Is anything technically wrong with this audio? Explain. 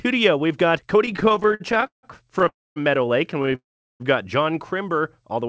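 Yes. There are two kinds of fault, each occurring twice, heard over a call path with nothing above 8 kHz, which fits G.722 at 64 kbps.

Repeated stalls (stutter) occur from 1.06 to 2.48 s and again from 3.38 to 3.55 s. In the first stretch, 25 brief gaps are filled by continuing the last sound, the longest lasting 164 ms. In the second, five gaps of no more than 15 ms each are filled the same way. In both, about 31% of the span is concealed. Packets arrived late, so the jitter buffer kept running dry and the audio drags choppily. Unlike a freeze, these are many short catches rather than one long hold.

A call audio freeze follows each stutter, from 2.48 to 2.78 s and from 3.55 to 4.02 s. The last sound is held and fades, leaving about 0.24 s and 0.38 s of silence respectively. The likely cause is packets held up in transit, emptying the jitter buffer. The audio then resumes where it stopped, with nothing missing, which sets it apart from a dropout.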